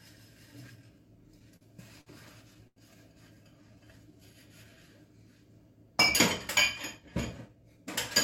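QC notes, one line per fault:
1.56–1.64 s, 2.01–2.09 s and 2.67–2.79 s: short stall from a late packet, three times. Each time a packet missed its slot and the jitter buffer ran dry, so the receiver held the last sound for about 46 ms, 54 ms and 90 ms before resuming exactly where it stopped. Nothing is lost, but each event leaves a sound frozen and drawn out, with a faint buzz or dip.
3.35–4.84 s: jitter buffer slow-down. With its reserve running low or its target delay just raised, the receiver repeated single pitch periods and pieces of pauses again and again, adding 168 ms across this stretch. Playback drops to 89% speed while pitch stays put, so the audio sounds stretched and sluggish, with sounds lingering longer than they should.
7.48–7.85 s: jitter buffer speed-up. Too much audio had built up in the buffer, so the receiver trimmed short pieces of one or a few pitch periods in quick succession, cutting roughly 50 ms. 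The passage runs at 113% speed at unchanged pitch, so the audio sounds hurried and compressed in time.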